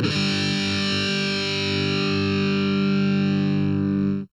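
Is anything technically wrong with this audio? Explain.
Yes. Throughout the clip there is channel delay (comb filtering): one channel lags the other by about 0.7 ms, and when the two are summed to mono they cancel at evenly spaced frequencies, starting around 700 Hz. The result is a hollow, phasey sound.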